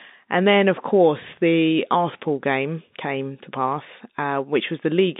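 Nothing in this speech recording stands out as a technical fault. The sound sits within a telephone band of roughly 150 Hz to 3.7 kHz, as expected of G.711 telephone coding, which fits a 64 kbps mu-law line.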